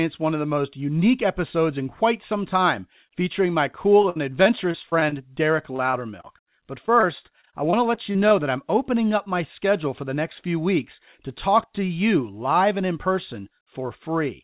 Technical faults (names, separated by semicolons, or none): repeated packet loss (robotic sound)